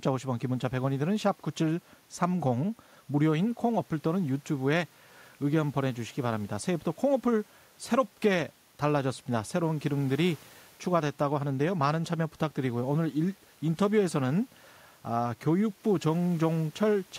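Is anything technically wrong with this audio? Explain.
No, nothing is technically wrong with this audio.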